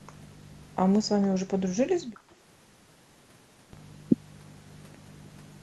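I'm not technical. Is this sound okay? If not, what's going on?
No. From 2.12 to 2.26 seconds the room sound behind the speech dips and then comes back, a brief hole lasting about a tenth of a second. This is background gated by the echo canceller. That part of the call software listens for sound coming out of the loudspeaker, and while it hears that, it turns the microphone down sharply so the far end doesn't hear itself. Here it clamped down briefly and let go.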